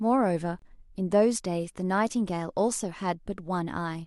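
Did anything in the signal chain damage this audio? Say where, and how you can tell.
Yes. At the playback stage, a gap between stream segments opens at 0.59 to 0.62 s. The silent hole has hard edges. Segment timestamps at a one-second boundary leave about 26 ms unfilled.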